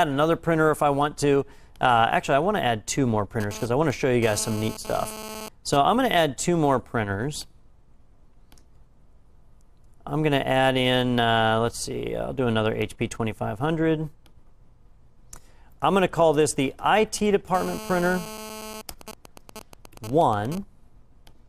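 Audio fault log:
3.40–5.77 s and 17.55–18.82 s, GSM phone buzz: a nearby 2G phone's 217 Hz transmit bursts are rectified by the audio circuit. The result is a raspy, harmonic-rich buzz about 14 dB below the signal, intermittent first as during data transfer, then steady as in a call.
18.89–20.58 s, GSM signalling bursts: with the phone's user silent mid-call, only short burst groups are sent and rectified, giving even ticks with a longer 217 Hz buzz twice a second, roughly 15 dB down.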